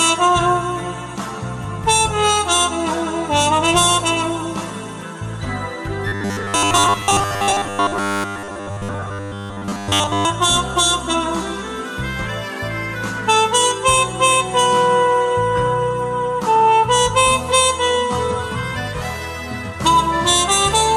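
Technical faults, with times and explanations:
6.08–10.25 s: robotic sound from repeated short buffers. The sound turns into a rigid metallic buzz at 100 Hz, loosely tracking the original. Likely cause: audio arriving too seldom, so a 10 ms chunk is replayed over most of the real signal, imposing that pitch.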